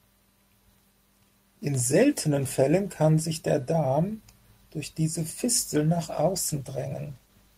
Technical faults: call bitrate drop

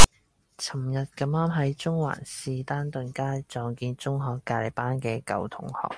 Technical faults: file tags played as audio

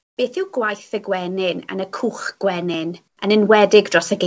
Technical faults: comfort noise in place of the background; automatic gain rising

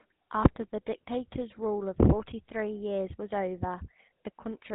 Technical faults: GSM full-rate codec

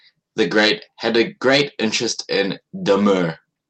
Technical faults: none

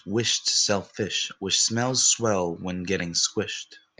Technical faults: none

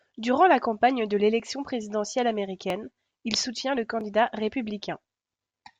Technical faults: clock drift buffer slips

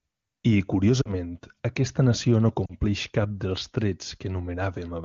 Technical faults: lost AMR speech frames

